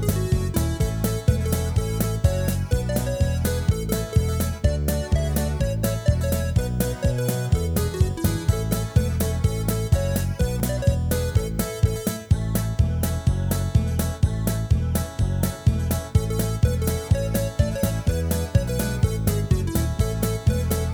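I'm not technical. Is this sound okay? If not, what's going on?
No. At 10.6 s the sound jumps ahead, losing about a hundredth of a second. This is likely a dropped buffer (overrun), where the recorder missed a tiny piece.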